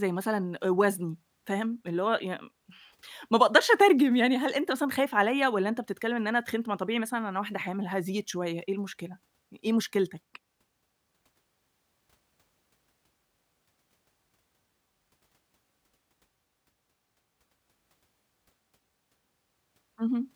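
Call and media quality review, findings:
No faults found on listening; nothing to log.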